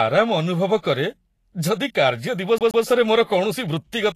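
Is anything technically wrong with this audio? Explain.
Yes, there are three faults.

Vorbis compression runs through the whole speech clip. The damage is plainly audible, and it is likely Vorbis coding at a low bitrate, around 35 kbps. The codec fits a smooth spectral floor and quantises the residue above it coarsely, so fine treble detail is replaced by noise of similar energy. Nothing survives above 14.1 kHz, and the upper range sounds hissy and grainy, with roughened tones and softened consonant attacks.

A CD stuck on one turn appears from 2.58 to 2.84 s. A scratch keeps throwing the laser back to the same point on each rotation, so a 127 ms slice of audio plays twice in a row. Each jump brings a brief mute, and the result is the quick, evenly spaced stutter of a skipping disc, which interrupts the flow of the speech.

Pre-echo occurs at 3.24 s. A sharp attack lands late within a transform block, and the quantisation noise meant for that loud moment is spread across the entire block, including the quiet stretch before it. 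About 50 ms of hiss comes in ahead of the onset, so the attack sounds smeared and less crisp than it should.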